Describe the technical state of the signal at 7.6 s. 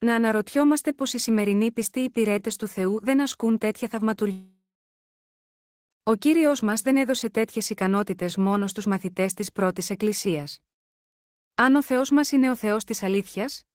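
Around 7.6 s the speech signal is intact, with no audible fault at that moment.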